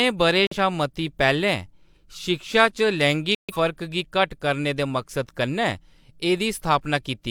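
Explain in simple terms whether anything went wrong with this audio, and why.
Two short gaps of silence cut into the speech, at 0.45 to 0.56 s, just before "शा मती", and at 3.35 to 3.57 s, before "फर्क गी". This is a corrupt frame muted fault. Damaged compressed data was rejected, so the player filled those moments with silence.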